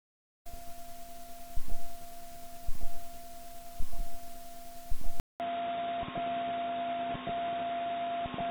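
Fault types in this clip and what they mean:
Input switched to a poorer device: at 5.20 s the sound drops out for 0.2 s, then returns duller, with nothing above 3.8 kHz, about 10 dB quieter and carrying its own background noise roughly 35 dB down. The input likely moved to another microphone or a headset's call profile.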